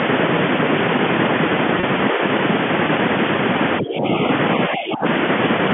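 At 1.80 to 1.83 s, a 30 ms gap, consistent with a single lost packet, shows packet loss with pitch repetition. The receiver filled the hole by looping the last pitch period, so the speech briefly holds on a slightly buzzy, static tone before resuming. On a spectrogram the harmonics run perfectly flat across those 30 ms, with no natural pitch movement. The waveform shows identical repeating cycles that fade slightly before the normal signal cross-fades back in.

Three level dips follow: a shallow one of about 5 dB at 2.12 to 2.22 s, then deeper ones of about 15 dB at 3.81 to 4.06 s and 4.69 to 5.05 s. These are likely speech suppressed in double talk, where the echo canceller could not separate the talker from the far-end echo and turned the near side down. The voice sounds pushed back or thinned during each dip. The waveform envelope sags abruptly, and the spectrogram shows the whole band, which tops out near 3.4 kHz, fading lighter with the upper harmonics going first.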